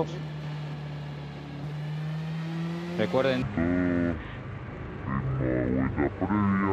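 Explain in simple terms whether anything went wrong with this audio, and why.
From 3.42 s to the end of the clip, there is a section at the wrong speed. Everything plays at about 0.55 times its proper speed, so the sound drags and drops nearly ten semitones lower, close to an octave. Speed and pitch fall together and suddenly, unlike a pitch-shift fault, where only the pitch moves, or a gradual wobble. This likely happened because that stretch was played against the wrong clock.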